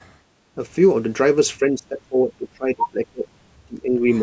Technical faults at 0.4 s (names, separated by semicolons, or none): background gated by the echo canceller